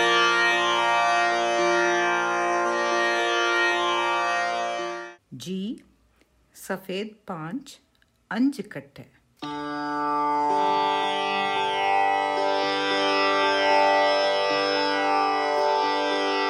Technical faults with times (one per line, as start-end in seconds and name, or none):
none